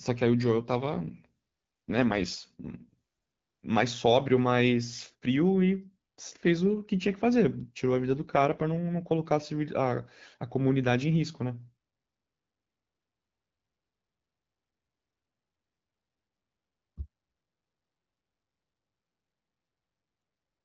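At 0.60 s the speech turns rougher and more synthetic until 3.64 s, then does so again from 7.98 to 9.32 s. Both are AMR rate drops: the network told the AMR wideband codec to code the speech with fewer bits and spend the rest on error protection. The roughness fits a step down from 12.65 to 8.85 kbit/s. The bandwidth stays the same, there is no gap, and clearer wideband sound returns once the rate recovers.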